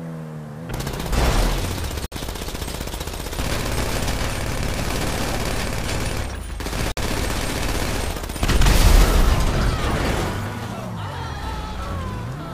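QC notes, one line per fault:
2.06–2.12 s and 6.92–6.97 s: Bluetooth stall. The sound drops to silence for 58 ms, then 53 ms, and resumes. This is likely packets held up by radio interference, starving the headphone buffer. The waveform shows flat gaps, and the spectrogram shows blank vertical bands.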